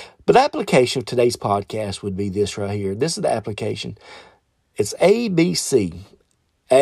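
Speech, with nothing technically wrong with it.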